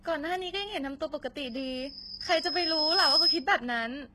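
HE-AAC compression runs through the whole speech clip, and the treble is heavily damaged. The top of the spectrum is synthesized rather than carried: lower bands are copied upward and shaped by a coarse envelope, so harmonics fail to line up across the crossover and s sounds come out gritty and metallic. Nothing reaches above 12.3 kHz. The heavy damage points to a low rate, likely HE-AAC v2 at around 16 kbps.

Loudspeaker feedback squeal appears from 1.46 s to 3.46 s as a single tone at 4.9 kHz. The microphone is picking up the loudspeaker it feeds, and at that one frequency the loop gain exceeds one, so the tone feeds on itself. It swells over about a second and a half to roughly 10 dB above the speech, then stops.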